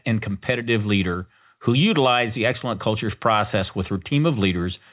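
No technical faults can be heard in this speech.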